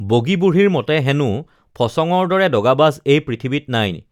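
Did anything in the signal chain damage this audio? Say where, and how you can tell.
No, nothing along the chain shows up as damage in this speech recording; every stage passes it without a mark I can point to.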